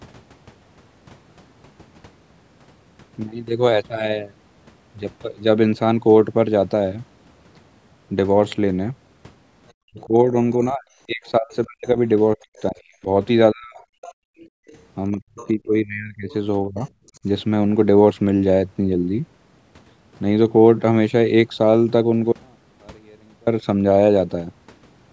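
Speech recorded over a call, band-limited to 8 kHz by the call's microphone processing, with several echo-canceller faults between about 9.7 and 17.2 s. The other side's voice leaking through appears faintly at 9.68–10.05 s, 11.25–12.62 s and 13.77–17.2 s, roughly 25 to 35 dB below the talker, likely residual loudspeaker echo that the canceller left in the microphone signal. It is a second, separate voice, not a distortion of the talker's own. Speech suppressed in double talk runs from 9.87 to 13.77 s and from 15.14 to 17.24 s, likely because both sides spoke at once. The talker's voice sinks by up to about 40 dB in pieces, around two seconds in all and then about one second, while that leaked voice is present. The background gated by the echo canceller is different because it removes the room sound itself. It falls by about 36 dB from 14.12 to 14.67 s and by about 18 dB at 17.10–17.15 s, then snaps back. 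The audio dropout to a faint residue, from 22.32 to 23.47 s, is an abrupt 1.15 s loss, likely a signal break, leaving only faint sound about 35 dB down. Unlike a pause or a fade, it cuts off and resumes mid-flow.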